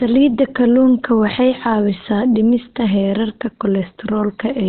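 From start to finish the speech is muffled and hoarse, with nothing above about 4.3 kHz, and the damage is heavy. This is likely Opus compression at a very low rate, consistent with about 12 kbps, where the encoder drops to its narrowband speech (SILK) mode. What separates it from MP3 is the absence of swirling, watery holes; the sound is dull and raspy instead. A plain low-pass filter would cut the top cleanly without this hoarse texture.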